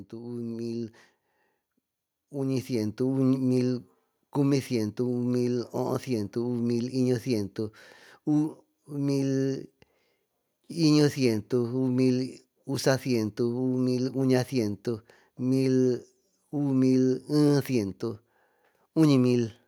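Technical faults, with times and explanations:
0.11–3.05 s, automatic gain rising: the gain control judged the input too quiet and lifted it by about 8 dB, so speech and background swell together.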